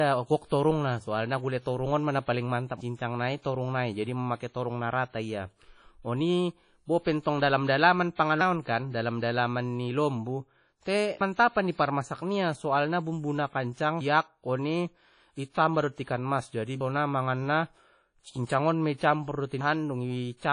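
Throughout the speech, codec damage is plainly audible, likely from WMA compression. Nothing remains above 10.1 kHz. The sound rings and is washy. Hiss breathes with the signal. Long blocks smear quantisation noise and drop weak components, which fits a bitrate near 32 kbps.

From 15.50 to 15.55 s there is pre-echo. A hiss about 56 ms long runs ahead of an attack. The attack fell late in a transform block. Noise sized for the loud part filled the quiet before it, so the onset sounds soft or smeared.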